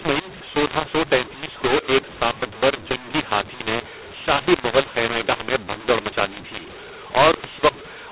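Throughout the clip the speech carries a mu-law and A-law mix-up: audio encoded with A-law appears to be decoded as mu-law, so the companding curve is misread. Levels come out scrambled, some too loud and others too quiet, giving harsh distortion. Near-silent samples are lifted, filling pauses with noise, over a band limit that fits normal 8 kHz G.711 telephone coding.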